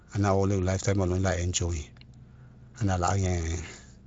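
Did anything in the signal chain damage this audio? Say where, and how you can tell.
No, nothing in the signal chain damaged this speech. It has passed through the Speex codec at a fairly generous setting, which leaves only a light codec texture and no content above about 7.5 kHz.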